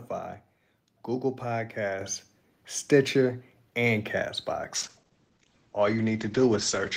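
At 2.01 s there's a microphone volume step up: the call software decided the mic was too quiet and bumped the device's input gain in one go, by about 6 dB. You hear the whole picture jump louder at once, voice and room tone together. There's no fade, just a sudden lift that then stays put.

From 4.76 s to the end of the speech there's a call bitrate drop. The bandwidth estimate fell, so the encoder was told to spend far fewer bits and codes everything more coarsely. The sound gets rough and watery, and the top end is cut off above 8 kHz, so it goes muffled for those last 2.2 seconds. The change is consistent with the encoder stepping down from around 32 kbps to about 10 kbps.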